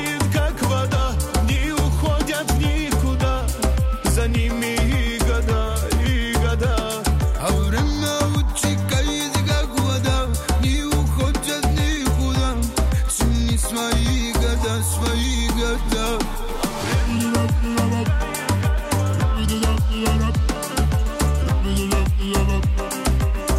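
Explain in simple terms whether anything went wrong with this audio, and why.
Nothing went wrong with this audio; there is nothing here to explain.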